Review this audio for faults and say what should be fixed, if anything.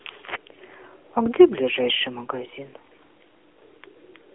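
The whole recording carries the sound of the AMR narrowband mobile codec. The speech sits inside a 300 Hz to 3.4 kHz telephone band, and the voice has a buzzy, synthetic edge, which fits the low 7.4 kbps mode. A plain band-pass filter would only thin the tone. This codec rebuilds each 20 ms frame from a vocal-tract model and a few pulses, and that adds the artificial buzz. To prevent it, record or route the speech over a wideband path, not a 2G/3G mobile call.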